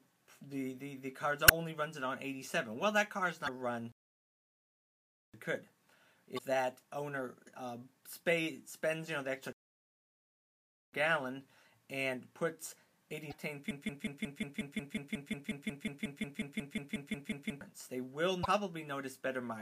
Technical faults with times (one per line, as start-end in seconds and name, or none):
1.45-1.51 damaged data in a compressed stream
3.44-3.49 damaged data in a compressed stream
3.92-5.34 playback stall
6.34-6.39 damaged data in a compressed stream
9.53-10.93 playback stall
13.29-13.34 damaged data in a compressed stream
13.71-17.61 broken-record loop
18.41-18.46 damaged data in a compressed stream